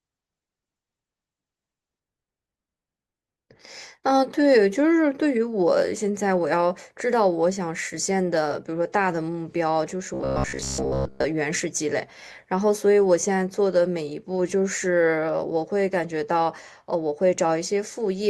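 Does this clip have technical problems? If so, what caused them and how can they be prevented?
Yes, two. From 0.0 to 2.0 s the stream starts at a low bitrate: the treble is thin and smeared with codec artefacts, which fits something like Opus at 12 kbit/s, then it jumps cleanly, with no gap, to fuller sound around 64 kbit/s. Starting on a higher rung, or buffering a moment longer before playback, would avoid it.

Between 10.14 and 11.25 s there's robotic sound from repeated short buffers: a stiff, metallic buzz near 66.8 Hz, which points to roughly 15 ms chunks being looped while most of the real audio there gets skipped. The likely cause is audio arriving late to the playback buffer. A larger jitter buffer would prevent it.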